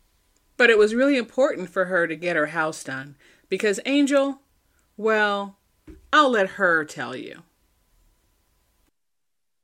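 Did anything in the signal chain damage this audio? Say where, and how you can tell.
No, nothing in the signal chain damaged this speech.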